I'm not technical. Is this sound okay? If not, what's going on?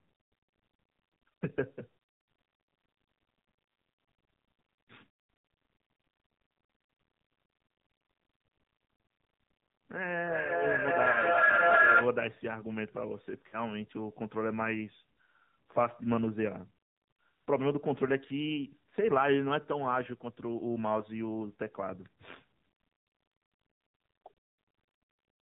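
No, it isn't. There are three separate problems.

The whole recording has passed through the AMR narrowband mobile codec, the older phone-network speech format. It drops everything above 4 kHz, so the speech sounds muffled and boxed-in, and at the fairly low quality used here it also turns buzzy and robotic. Unlike a simple muffled microphone, it adds that artificial, synthetic texture to the speech itself.

From 10.24 to 12.22 seconds there is feedback echo between two devices. Two phones or computers on the same call were in one room, and one picked up the other's loudspeaker. The speech comes back roughly every 0.4 seconds, again and again, and the repeats build up until they are louder than the original speech instead of fading. That build-up and the ringing, thinning repeats set it apart from an ordinary room echo, which dies away.

There are also lost AMR speech frames, pieces of the phone signal that were spoiled over the radio link. 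The phone filled each gap by stretching out the sound just before it. The first is a brief dip or warble from 11.12 to 11.17 seconds, inside the echo. The second, from 13.48 to 13.58 seconds, is longer: the speech smears and fades, then returns weak or rough for a moment. This differs from a simple dropout, which goes abruptly silent.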